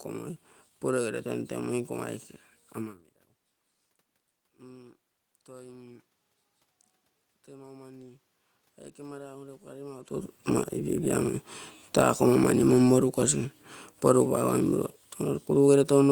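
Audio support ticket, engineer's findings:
Speech and room noise swell together by about 7 dB, 7.46 to 12.54 s. Automatic gain rising: AGC read input as too quiet and ramped gain slowly. Level shift near 10 s is talker movement.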